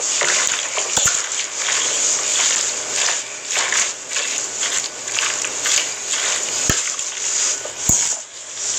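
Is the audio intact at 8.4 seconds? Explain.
Yes, the audio is intact at 8.4 seconds, with no fault at that moment.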